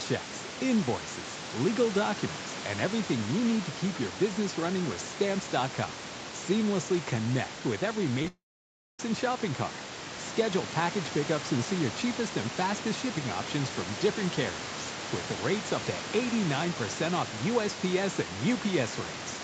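A speech clip of a call with packet loss just after "connect with every". Two bursts of short concealed packet loss come first, at 8.22 to 8.25 s and at 8.25 s. The gaps last about two and one hundredths of a second. The receiver stretches the last sound over the hole, which leaves a brief smear or wobble. A long network dropout is the likely cause of what follows, from 8.28 to 9.00 s. The concealed sound fades to about 0.6 s of silence. The audio then resumes at "and shopping cart", and the lost stretch never plays.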